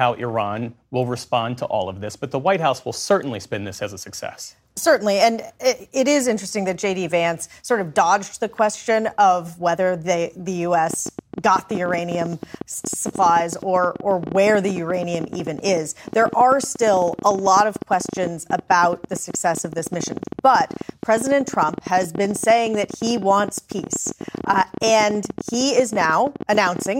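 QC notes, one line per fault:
10.9–26.87 s, train of clicks: roughly two hundred similar sharp pulses at about 14.7 per second, unevenly spaced, peaking about 5 dB above the sound and audible in pauses too. The pulses likely come from nearby interference, unlike random crackle.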